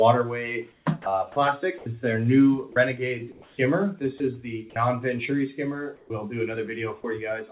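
From 0.72 to 1.86 s, and again from 2.72 to 4.2 s, the sound is chopped by the voice detector, likely from discontinuous transmission gating on and off. About 260 ms and 320 ms of material give way to brief synthetic fill. The result is choppy. On a spectrogram, short smooth noise patches interrupt the detailed texture. The waveform shows clean envelope breaks.

Between 5.96 and 6.1 s, comfort noise replaces the background for about 140 ms. The real ambience, which sits about 32 dB below the loud parts, becomes a flat, featureless hiss about 6 dB quieter. A spectrogram shows a uniform smear, and the waveform shows a lower, steady band.

From 6.07 to 6.1 s, the onset is clipped by the voice detector. Its first 30 ms are missing, so the sound starts abruptly with no soft rise. The waveform jumps in abruptly, and the spectrogram shows a hard vertical edge.

From 7.02 to 7.04 s, sound is dropped by the voice detector. 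A 20 ms gap, about 10 ms of it real sound, is filled with noise, leaving a tiny notch in the waveform. Throughout the clip, the spectrum stops at 4 kHz, which fits a G.711 call codec at 64 kbps.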